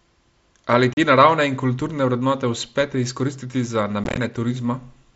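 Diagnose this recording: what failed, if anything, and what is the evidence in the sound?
Hard-edged holes cut the speech from 0.93 to 0.97 s, before "te naravne in kulturne", and chop it roughly from 4.04 to 4.18 s, after "izkoristiti za". This is unconcealed Bluetooth headset packet loss on the mSBC wireless link: packets, which fit 7.5 ms frames, went missing and silence replaced them unsmoothed.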